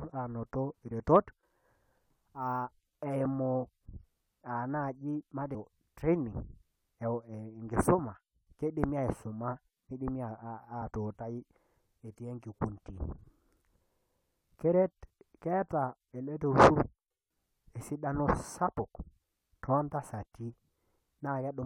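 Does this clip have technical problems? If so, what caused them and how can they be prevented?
Yes. Compressed frames are skipped at 5.54 to 5.56 s: about seven 23.2 ms frames, roughly 150 ms, drop out, so the audio jumps ahead. A spectrogram shows a brief vertical smear where patterns jump. Checksum-verified transfers and error-resilient encoding prevent this.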